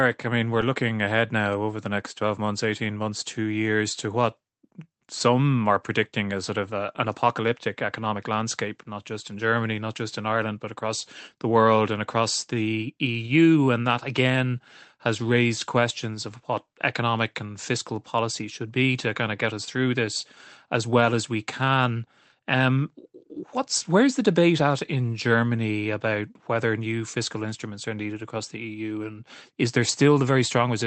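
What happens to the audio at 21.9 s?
At 21.9 s you're in the middle of a long run of repeated timing corrections that starts at 1.26 s, just after "I mean we're looking", and goes all the way to 30.59 s. The receiver keeps slipping in tiny repeated pieces, so the speech plays at about 99% speed and picks up roughly 400 ms of extra length overall. It's heard, if at all, as small, unevenly spaced hiccups and a slightly dragging, unsteady pace.

The root is clock drift between sender and receiver. The sender's clock runs about 1.5% slow, so the jitter buffer keeps draining rather than holding steady. To avoid running dry, the receiver fills the gap by repeating short chunks again and again, always in the same stretching direction. That's why the hiccups keep turning up right through this stretch instead of happening once.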